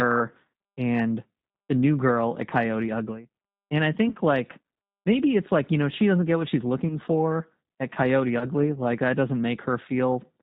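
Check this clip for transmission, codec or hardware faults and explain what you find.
Two faults are present. The whole clip carries the sound of a low-rate speech codec, and the audio breaks up briefly three times.

The G.729 codec damage is plainly audible throughout. Nothing above 4 kHz comes through, so the speech sounds narrow and muffled. The coder rebuilds speech from a vocal tract filter, a pitch predictor and a few pulses per 5 ms subframe. That leaves the speech rough and slightly synthetic. The character fits G.729A at 8 kbit/s.

VoIP packet loss concealed by the speech codec occurs at 4.09 to 4.14 s, just before "like maybe it's like". It occurs again at 6.88 to 6.96 s, between "doesn't get what she's" and "for at", and at 8.39 to 8.49 s. Each gap fits one lost 20 ms packet. The decoder filled the gap by extending its last pitch and filter at falling gain. You hear a short buzzy or smeared stretch that fades. 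The speech stays weak a little longer because each frame builds on the one before.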